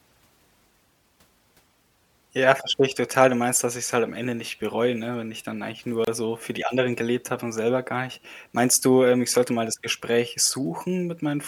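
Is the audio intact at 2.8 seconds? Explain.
Yes, at 2.8 seconds the speech plays through intact, with no dropout, click, distortion or other fault at that moment.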